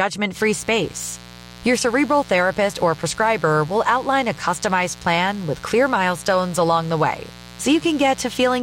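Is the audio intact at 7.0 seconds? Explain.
No. Mains buzz runs under the speech at 7.0 s, part of a stretch from 0.33 s to the end at 8.63 s. Switching spikes from a dimmer, rectifier or poorly shielded cable enter the signal twice per 60 Hz cycle, so the interference carries a dense stack of 60 Hz harmonics reaching into the kilohertz range. It sits roughly 20 dB below the speech and is heard as a constant, raspy buzz.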